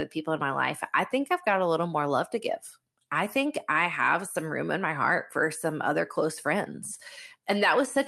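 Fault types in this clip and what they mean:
No faults present: the speech shows only the expected traits of a call path, with content ending near 12 kHz and the usual coding noise that fits an Opus stream at around 40 kbps.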